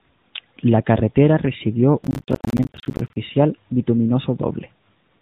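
From 2.04 to 3.16 s a processor overload crackle tears through the speech. Missed buffer deadlines leave dozens of hard-edged silent gaps, which fits buffers of about 10 ms. Unlike scattered packet-loss dropouts, they fuse into one dense, gritty burst that stops once the load passes.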